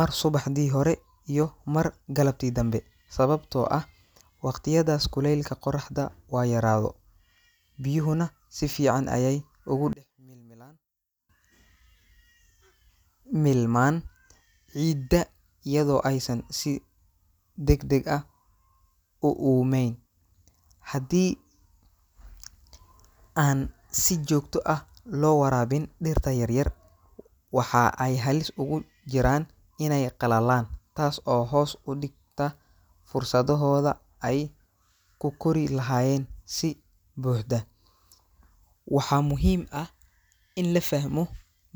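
From 9.93 to 11.29 s the speech drops to a faint remnant, about 26 dB down. The centred voice and low end nearly vanish. The likely cause is one channel inverted. One side's reversed polarity cancels what both channels share in mono.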